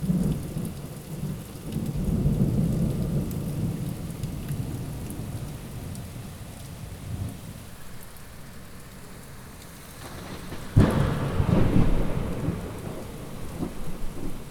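No technical faults can be heard anywhere in the recording, and the signal holds steady throughout.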